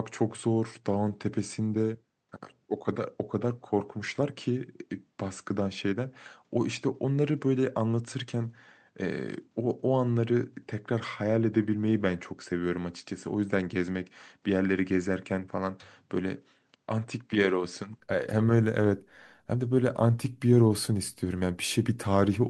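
From 0.0 to 18.0 s the speech is dull, slightly quieter and empty above 8.3 kHz, likely an input switched to a poorer device, clearing without a gap.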